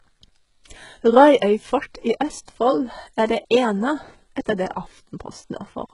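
A speech clip with its whole length run through a heavily squeezed encoder, most likely HE-AAC at a very low bitrate, around 12 kbps. Only the lower spectrum carries real detail, and the treble is rebuilt by copying lower bands upward under a coarse envelope, so the top sounds bright but synthetic, with harmonics that no longer line up. S sounds come out gritty and lispy, and nothing reaches above about 11.1 kHz.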